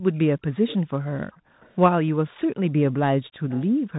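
Across the whole speech clip the sound is narrow and muffled, with nothing above 3.8 kHz, scratchy s sounds and a grainy hiss under everything. That is the Bluetooth CVSD headset codec: one bit per sample at 64 kHz with an adapting step size, and its damage is plainly audible.

From 0.01 to 0.12 s the room sound dips briefly by up to about 25 dB for roughly 50 ms. This is background gated by the echo canceller, which pulled the microphone down hard while the far-end loudspeaker was active.

From 0.67 to 0.77 s a faint, delayed copy of the speech trails about 300 ms behind, roughly 15 dB under the direct sound. This is likely an echo leak: a loudspeaker's pickup slipped past an imperfect echo canceller and was sent back.

From 0.82 to 1.6 s the background is gated again, falling by up to about 40 dB for most of that span. Similar ghost echoes, still 300 ms late, follow at 1.61 to 1.74 s (around 35 dB down) and 2.35 to 2.40 s (around 40 dB down). 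Another deep gate, up to about 40 dB, hollows the background between 2.47 and 3.01 s for a fraction of a second in total. From 3.24 to 3.67 s a more noticeable echo returns, about 20 dB below the speech and 303 ms behind. From 3.41 s to the end the background is gated once more, dropping by up to about 40 dB for roughly a third of a second.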